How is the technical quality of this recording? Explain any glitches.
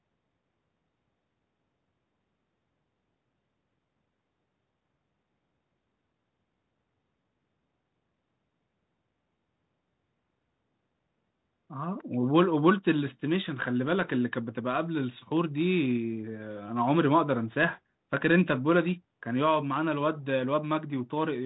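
Nothing stood out on listening to this telephone-band speech recording, which carries the narrow, bass-trimmed sound of a call passed through 32 kbit/s G.726 ADPCM coding.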